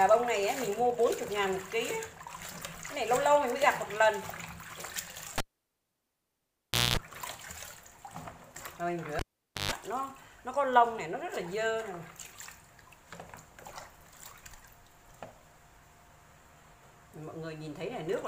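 A live cable was pulled and plugged in again twice. At 5.38 s the connection breaks with a pop and the sound drops to near silence for about 1.5 s. As the plug goes back in, only the tip makes contact at first, letting in roughly 0.21 s of 60 Hz mains buzz before a second pop at 6.97 s brings the sound back. The same thing happens from 9.19 s to 9.71 s, with a shorter gap of about 0.47 s and roughly 0.13 s of 50 Hz hum.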